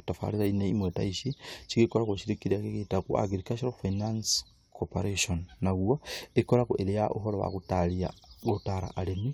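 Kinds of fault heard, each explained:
No technical faults are audible anywhere in the speech.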